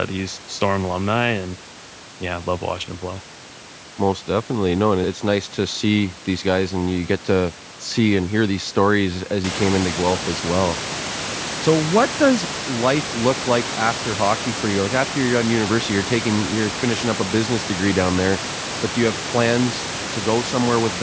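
No technical faults present.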